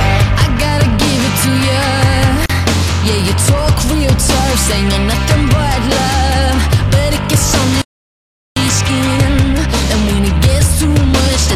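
At 2.46 s a gap at a join of encoded pieces appears. The audio was evidently encoded in separate sections and butted together without trimming the encoder's start-up delay and end-of-frame padding, so a short run of silence was left in place. The continuous sound drops out for about 37 ms, until 2.50 s, with smeared edges, then resumes exactly where it broke off.

From 7.82 s to 8.56 s there is a playback stall. The output goes silent in mid-flow for roughly three quarters of a second (747 ms), most likely because the player ran short of data or its audio thread was held up. The dropout is long enough to register clearly as a break in the sound rather than a click.

The stall leads straight into time-compressed catch-up. From 8.56 s to the end, the player trims its accumulated backlog by removing small slices of audio and cross-fading across the cuts. The sound runs about 1.15 times faster than normal while keeping its original pitch, so it comes across as hurried.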